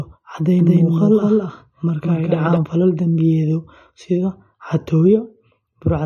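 From the first moment to the end, the speech carries MP3 compression damage that is plainly audible, most likely from a low bitrate in the region of 38 kbps. Starved of bits, the encoder drops weak frequency lines that flicker on and off between frames, giving sibilants a watery, swirling edge and softening consonant attacks. On a spectrogram the energy stops flat at 14 kHz, and the upper bands below that cut-off look patchy and speckled.

From 0.59 to 2.57 s a doubled audio track sits over the speech. A second full-band copy, about as loud as the original, trails it by roughly a fifth of a second, most likely because the same signal was captured again through a slower path. The speech sounds stuttered and smeared, with no reverberant tail. The copy cuts in and out abruptly, starting just before "falal dambiyeedyo". The waveform shows each syllable repeated at that fixed offset.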